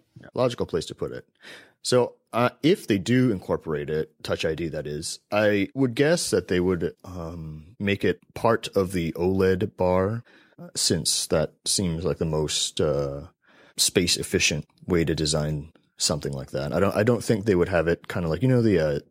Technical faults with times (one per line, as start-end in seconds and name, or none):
none